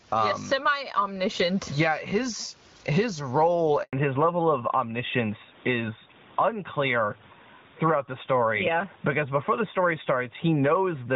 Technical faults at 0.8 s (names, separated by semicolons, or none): gain pumping